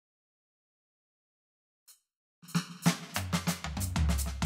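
A music clip with channel delay (comb filtering) from 0.00 to 2.86 s. One channel lags the other by well under a millisecond, around 0.7 ms, and the two are summed to mono, so shared content cancels at evenly spaced frequencies. The first notch sits near 700 Hz, with further notches at regular intervals above it, giving the music a hollow, phasey colouration that stays fixed in the spectrum for that stretch.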